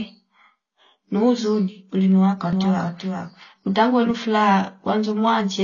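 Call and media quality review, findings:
Speech dull and band-limited for the whole clip, nothing above 6.9 kHz. Smeared consonants, fizzy, warbling texture on sibilants and held vowels. Likely AAC compression, AAC-LC at a low rate, consistent with roughly 24 kbps. Encoder drops high bands and coarsely quantises the rest against its hearing model. Codec damage plainly audible.

Doubled audio track from 2.53 s to 4.11 s, starting right after "nuzuuni ulinwa". Second full-band copy trails by around 400 ms, about 5 dB quieter, dry with no room tail. Starts and stops abruptly. Likely a second capture path or an edit leaving two offset copies mixed.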